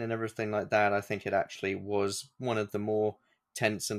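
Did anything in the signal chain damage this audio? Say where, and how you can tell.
No, nothing in the signal chain audibly damaged this speech recording; there are no dropouts, distortion, level jumps or other transmission or processing faults to point to at any stage.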